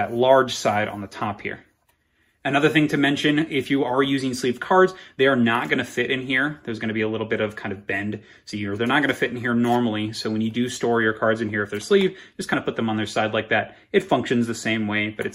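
At 12.53 s, compressed frames are skipped: about one 20 ms frame never reaches the output, so the audio jumps ahead by roughly that much.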